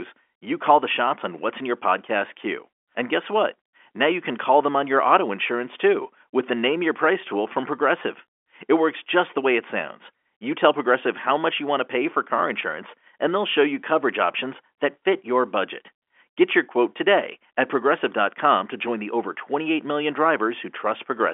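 Nothing in this speech recording stands out as a technical fault. It comes through G.711 telephone coding with the narrow line band of roughly 300 Hz to 3.4 kHz, so there is nothing above about 3.6 kHz.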